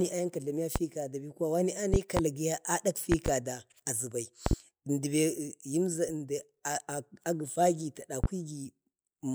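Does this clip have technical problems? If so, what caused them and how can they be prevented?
Yes. The speech carries loud pops at 0.76–0.80 s (one), 1.94–2.21 s (a pair), 3.12–3.30 s (a pair), 4.46–4.55 s (a pair) and 8.24–8.28 s (one). Each stands roughly 20 dB above the speech, the last roughly 15 dB, with the talking continuing underneath. The likely cause is a voltage spike from a plug, switch, static or driver glitch. On a waveform these show as tall, narrow spikes; on a spectrogram, thin full-height vertical lines. Secure connectors and mute channels before switching equipment.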